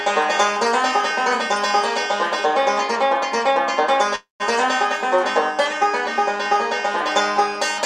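At 4.15 to 4.42 s there is a call audio freeze. The sound turns into a fading buzz or hiss, then about 150 ms of silence. It likely comes from delayed packets draining the jitter buffer. Nothing is lost; everything after runs about 245 ms late.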